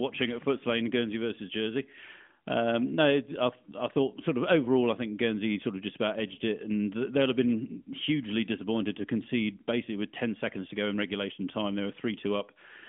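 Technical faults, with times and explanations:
No faults found; the speech sits on a narrowband mobile-codec path whose line band of 150 Hz to 3.5 kHz and empty spectrum above 3.8 kHz fit AMR-NB at 12.2 kbps.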